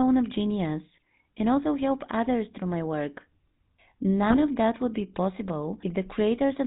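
From the start, the whole clip has that GSM full-rate codec texture. The coder models the vocal tract and drives it with a sparse, regularly spaced pulse train, so the excitation is crude and the result comes out buzzy and gravelly. Nothing gets through above 4 kHz, which takes the air off the top. The damage is plainly audible here, and it fits the old 13 kbps full-rate coder.

Then at about 4.30 to 4.38 s, just before "of that would be", you get GSM bit errors. Corrupted bits reached the decoder and scrambled the filter, pitch or gain values for a short run, so the spectrum warps and the level jumps. It comes across as a brief squawky, gargling pop. The span points to a handful of frames, roughly four, and an error rate of about 2%.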